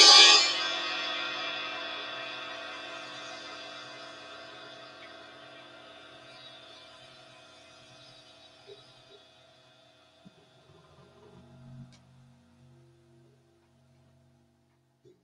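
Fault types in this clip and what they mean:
No technical faults can be heard anywhere in this recording of sounds. Nothing in the audio calls for a fault line here.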